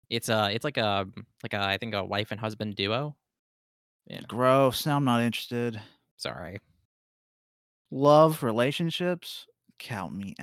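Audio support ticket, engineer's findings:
Full speech clip reviewed, no faults heard, no component implicated.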